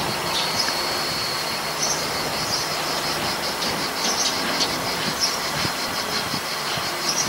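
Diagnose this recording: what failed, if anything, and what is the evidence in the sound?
At the driver or buffer stage, the recorder likely dropped audio between chunks, losing a few milliseconds each time one roughly 2-second block closed and the next opened. The sound jumps abruptly, with no gap, at 1.90 s and again at 3.89 s, the same two-second spacing.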